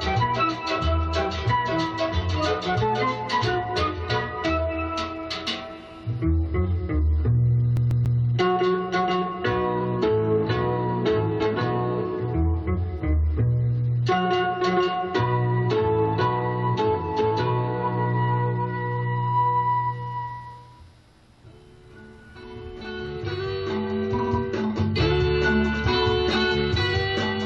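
A CD stuck on one turn, from about 7.77 s to 8.19 s, interrupts the audio with a fast, even stutter. The same slice of roughly 141 ms plays three times in a row, each return marked by a brief mute where the pickup jumps. That fixed loop length and regular rhythm point to a scratch sending the laser back one track at the same point on each rotation of the disc, rather than random read dropouts.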